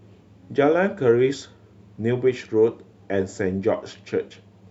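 No technical faults are audible.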